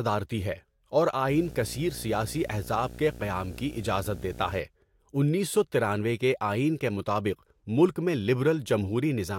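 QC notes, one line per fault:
1.28–4.60 s, video or display buzz: a screen or video cable has coupled interference into the audio path, laying a buzz at the 60 Hz field rate under the speech, with a grainy hash riding above it. The field rate sets the buzz's rough, pulsing quality, and the harmonics of each field refresh spread upward into the hash. It sits at about 15 dB below the speech, and stops at 4.60 s.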